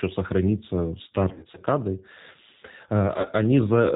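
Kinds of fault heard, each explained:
G.729 codec, throughout: Nothing above 4 kHz survives, and the speech has a rough, slightly synthetic grain. This points to an 8 kbit/s codec that rebuilds each short frame from a vocal tract filter, a pitch predictor and a few coded pulses.
VoIP packet loss concealed by the speech codec, 1.30–1.61 s and 3.16–3.26 s: Each gap in the packet stream is filled by the decoder extending its last pitch and filter at falling gain. The sound smears into buzzy, fading stretches that take time to recover once packets return.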